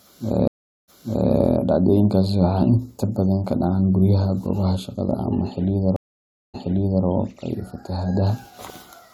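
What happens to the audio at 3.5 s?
Nothing goes wrong at 3.5 s; the speech continues intact through that moment, with no dropout, click or distortion.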